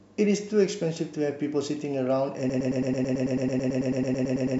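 A short speech clip that falls into a broken-record loop at 2.50 s and never recovers. From there to the end, the same fragment of about 0.11 s repeats back to back, 19 times in a row, in place of continuing speech. Whatever should have followed is simply gone. That kind of exact, seamless repetition most likely comes from the player or stream stalling and re-sending the last chunk it had buffered.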